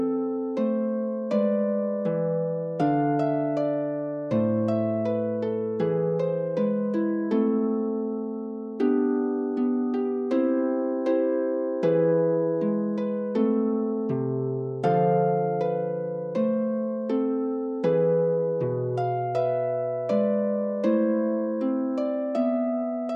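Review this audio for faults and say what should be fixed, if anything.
Nothing stood out on listening, so there is nothing here that needs fixing.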